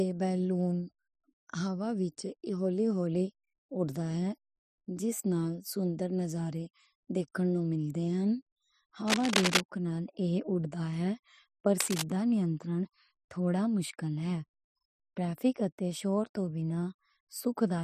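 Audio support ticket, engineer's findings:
Cable scratch noise, 9.06 to 9.61 s: dense, ragged rustling burst, roughly as loud as the speech, lasting about half a second. Likely a worn cable, connector or control being handled, its contact resistance jumping rapidly and injecting uneven noise into the line.

Cable scratch noise, 11.80 to 12.02 s: shorter scratch, about 0.2 s, a few dB under the speech. Likely the same intermittent-contact mechanism. Inspect and reseat or replace the cable and connectors.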